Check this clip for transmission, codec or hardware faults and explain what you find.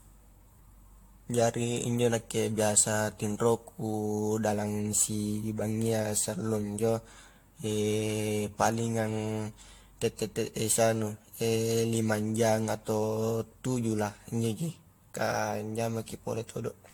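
One codec fault runs through the whole speech clip.

Generation loss, throughout: the speech sounds swirly, hollow and smeared, with blurred attacks and nothing above 19.3 kHz. It likely comes from around seven AAC-LC passes, each quantising on a shifted frame grid so the noise accumulates. The damage is heavier than one encode at the roughly 96 kbit/s this bandwidth fits would leave.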